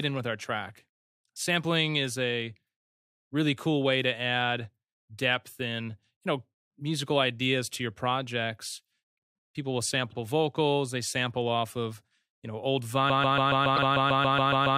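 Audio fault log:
10.10–10.15 s, repeated frames: a 52 ms block, which fits two compressed frames, plays twice, giving one brief stutter and adding 52 ms rather than looping.
13.10 s to the end, broken-record loop: a 140 ms fragment repeats exactly, back to back, about 12 times, likely from a stalled stream resending its last buffer, while the intended audio is lost.
13.76–13.79 s, repeated frames: within that loop, a 26 ms block, fitting one frame, plays one extra time, a single added stutter distinct from the steady 140 ms cycle.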